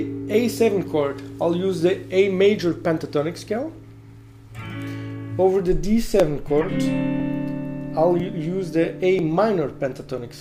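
A corrupt frame decoded appears at 4.59 to 4.62 s. A compressed frame arrived with flipped bits, and the decoder played it anyway, so misread gains and codes put energy at the wrong frequencies. It is heard as a brief, fairly quiet glitch, peaking at about -30 dBFS and lasting roughly one frame.

Periodic USB or driver dropouts begin at 6.20 s and repeat every 1.0 s until 10.18 s, about five times. Each time, something blocked the audio path and a few milliseconds of sound were skipped outright, so the signal jumps forward with a small regular tick or pop that is audible only while sound is present.

Two more corrupt frames decoded land within that stretch. The one at 6.61 to 6.66 s spans a couple of frames and is a loud glitch near -10 dBFS. The one at 8.83 to 8.86 s covers several short frames and peaks around -15 dBFS.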